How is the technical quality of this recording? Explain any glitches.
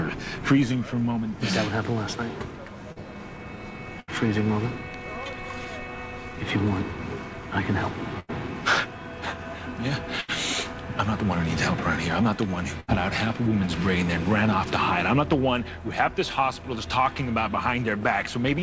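The recording has five dropouts from lost packets, one short and four longer. Throughout, nothing comes through above 8 kHz, which fits a wideband call codec such as G.722.

At 2.92 to 2.99 s there's a short concealed packet loss. About 40 ms never arrived, and the decoder stretched the previous sound across the gap, leaving a quick smear or wobble.

At 4.00 to 4.11 s, 8.20 to 8.31 s, 10.20 to 10.31 s and 12.80 to 12.91 s there's a burst of packet loss. Each time about 80 ms went missing, and the receiver kept the last sound going while fading it. You hear a held buzz or a dying hiss, then the audio jumps ahead with that chunk gone.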